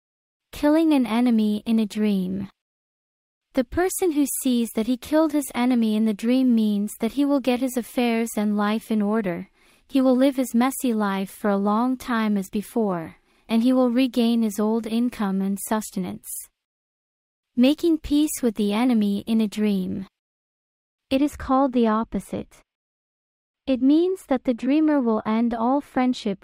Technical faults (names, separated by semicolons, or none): de-emphasis applied wrongly